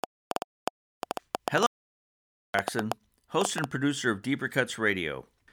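Right from 0.04 s there's a train of clicks running to about 3.65 s: roughly twenty pops at an uneven pace, around 6.4 per second, sticking up well above the speech. That's likely interference from nearby gear, or a flaky connection or supply spiking the line.

Meanwhile, at 1.66 s the speech cuts off dead in an audio dropout to silence lasting about 879 ms, until 2.54 s. There's no room tone in the gap, so the input was likely lost (a disconnect, failed link or stray mute) while recording carried on writing silence.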